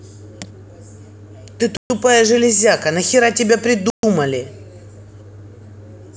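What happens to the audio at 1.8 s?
A gap between chunks opens from 1.77 to 1.9 s: a 132 ms silence at the join, with no speech missing afterward, unlike a dropout.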